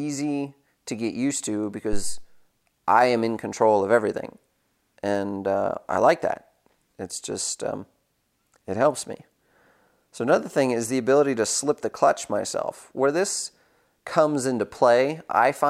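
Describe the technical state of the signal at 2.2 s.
At 2.2 s the signal is in the tail of a deep, low-frequency thump that runs from about 1.93 s to 2.28 s. It peaks at about −12 dBFS and dies away with a decay of roughly 80 ms. This is a phantom power thump. Phantom power or a similar supply was switched on or off on the live input, and that sudden DC step passed through the coupling capacitors. The resulting low pulse landed on top of the speech.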